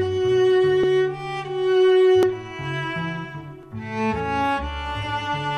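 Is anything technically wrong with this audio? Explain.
Yes. From 0.84 s to 5.03 s there are likely clock drift buffer slips: two clocks disagree by several hundred ppm, so a buffer drifts until roughly 50 samples are dropped or repeated. This sounds like a regular click every 1.4 s, about four times, while sound plays.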